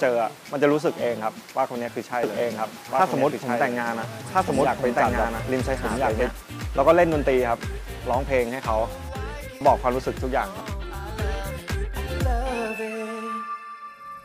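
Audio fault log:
2.23 to 6.31 s: doubled audio track. A full-band copy trails the original by about a second and a half at much the same level. It's dry, with no decay, and cuts in and out abruptly, likely from a slower second capture path or an out-of-step edit.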